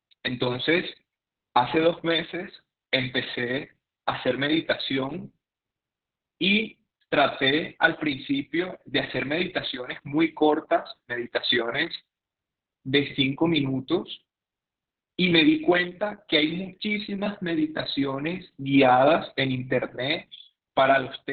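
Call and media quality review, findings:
Opus voice compression, throughout the speech. Muffled, hoarse, faintly robotic; nothing above 4.5 kHz. Probable component: sender encoder in SILK narrowband mode, heavy damage consistent with roughly 6 kbps and long 60 ms frames. Coarse excitation coding causes the roughness. Unlike a plain low-pass or narrowband line, the voice itself sounds grainy and synthetic, not just dull.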